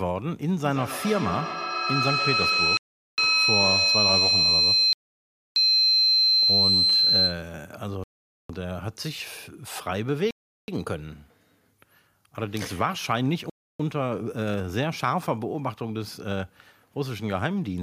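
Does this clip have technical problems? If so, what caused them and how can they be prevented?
Yes. From 0.64 s to 7.54 s a shrill tone near 4 kHz swells over the speech, peaking about 5 dB above it and pulsing at roughly a tenth of a second. This is feedback howl: two devices in one room on the same call form a microphone-to-loudspeaker loop that gains level each trip, so the repeats grow and narrow to one favoured frequency. Muting one device, or having everyone in the room use headphones, prevents it.

The audio also drops to complete silence five times and then resumes: 2.77 to 3.18 s, 4.93 to 5.56 s, 8.04 to 8.49 s, 10.31 to 10.68 s, and 13.50 to 13.80 s, gaps of 0.30 to 0.63 s. These are likely Bluetooth stalls, where interference delayed packets until the headphones' buffer ran empty and playback waited for resent data. Keeping the phone close to the headphones and away from crowded 2.4 GHz sources prevents them.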